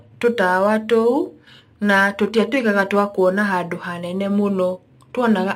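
Throughout the speech, a crude rate conversion has taken place, consistent with 44.1 kHz material pushed to 48 kHz by simply repeating the nearest sample rather than filtering. About one sample in every eleven or twelve is duplicated in a fixed cycle, and that regular error creates tones unrelated to the voice, sitting roughly 30 dB below it. The result is a gritty, inharmonic fizz that rides on the louder and brighter syllables.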